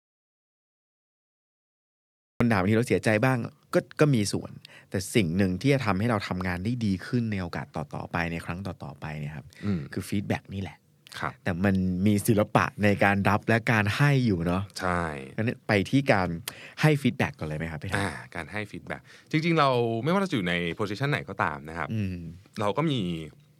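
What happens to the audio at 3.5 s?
Nothing goes wrong at 3.5 s: the audio is intact there, with no dropout, click or distortion.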